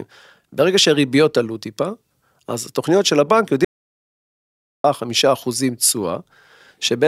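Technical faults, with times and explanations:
3.65–4.84 s, audio dropout to silence: the speech cuts off abruptly mid-flow and is replaced by about 1.2 seconds of silence, with no room tone or background hiss underneath, before it resumes just as suddenly. That dead-flat gap points to the input signal being lost, likely through a disconnected device, a failed link or a momentary mute, while the recorder kept writing silence, so whatever was spoken in that stretch is simply gone.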